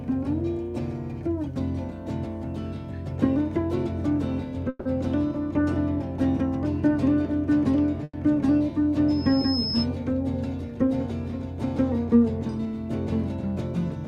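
Packets held up in transit likely let the receiver's jitter buffer run dry twice, producing a call audio freeze at 4.69 to 4.87 s and again at 8.03 to 8.15 s. Each time the last sound is stretched into a fading buzz, about 160 ms the first time and 100 ms the second, the latter ending in 20 ms of silence. The audio then resumes where it stopped with nothing lost, now running 160 ms and then a further 100 ms late. From 9.08 to 9.87 s a microphone is picking up the loudspeaker it feeds, and the loop gain tops unity at 5.2 kHz. This loudspeaker feedback squeal starts as a thin tone, swells over roughly half a second, and settles at about the same level as the audio itself before it stops.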